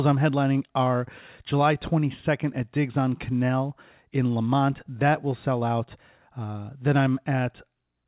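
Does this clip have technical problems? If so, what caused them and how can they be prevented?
No, the speech has no technical faults; nothing above 4 kHz is simply the narrowband limit of the call path, which fits a codec such as G.711 mu-law, so there is nothing to prevent.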